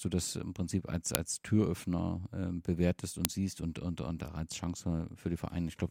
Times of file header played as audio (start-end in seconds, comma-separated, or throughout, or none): 1.15, 3.25